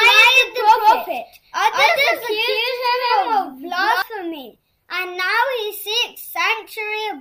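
From the start to 4.02 s a doubled audio track runs: a second full-band copy about 200 ms behind at roughly equal level, likely from a slower capture path. Unlike echo, it has no decay or room colour and stops abruptly.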